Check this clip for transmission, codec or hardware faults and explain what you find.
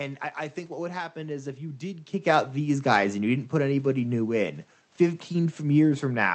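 Nothing here points to any fault at all.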